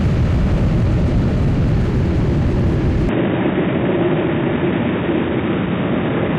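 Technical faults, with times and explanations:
3.09 s to 6.38 s, input switched to a poorer device: with no gap or loudness change, the sound turns dull and boxy, with nothing above 3.8 kHz, and a faint new noise appears beneath it. The input likely changed to a narrower-band microphone or headset profile with its own noise floor.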